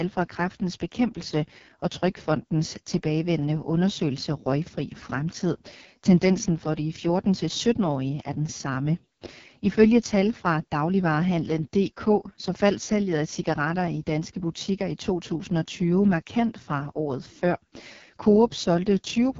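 AMR wideband (HD Voice) codec damage runs through the whole speech clip. The sound is heavily rough and raspy, which fits the lowest 6.6 kbit/s mode. A pulse-driven vocal tract model codes the band up to 6.4 kHz, shaped noise fills the band above it, and nothing remains above 7.3 kHz.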